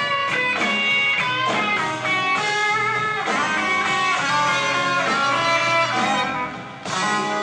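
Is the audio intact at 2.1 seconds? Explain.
Yes, the audio is intact at 2.1 seconds, with no dropout, click, distortion or other fault audible at that moment.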